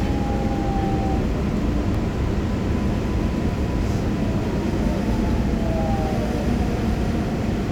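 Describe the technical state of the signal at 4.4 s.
At 4.42 s the audio jumps forward, losing roughly 30 ms with no gap of silence: audio missing between chunks, likely from a handover between 2.5 s processing blocks. It sounds like a brief skip. On a waveform it appears as an abrupt discontinuity, and on a spectrogram as a thin vertical broadband line.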